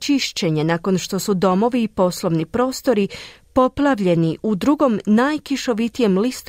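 Listening through the speech recording, nothing stood out as a technical problem at any point.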